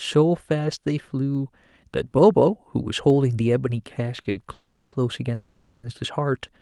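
Speech carried over a WebRTC call path, with its sound rolling off above about 12 kHz, shows three kinds of fault. Two isolated sharp clicks at 1.35 s and 3.10 s are most likely dropped samples, each losing only about a tenth of a millisecond. The waveform jumps to a later value without any sound going missing, which separates these from the longer packet events later on. At 4.21 s and 4.30 s come two short stalls from a late packet. The jitter buffer briefly ran dry, so the last sound was held for about 30 ms and then 50 ms with a slight buzz or dip before resuming in place. Longer, decaying holds from 4.53 to 4.95 s and from 5.34 to 5.86 s sound like call audio freezes, likely from packets held up in transit. The held sound fades for roughly 390 ms and 490 ms, the first ending in about 60 ms of silence, and playback then resumes where it stopped.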